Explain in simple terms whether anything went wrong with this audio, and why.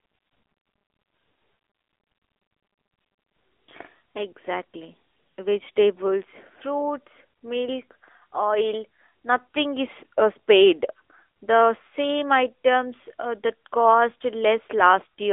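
The speech went through an AMR narrowband mobile codec for the whole clip, like an older phone call. Nothing above about 3.7 kHz survives, so it sounds thin and muffled. The squeezing is plainly audible and makes the voice buzzy and synthetic.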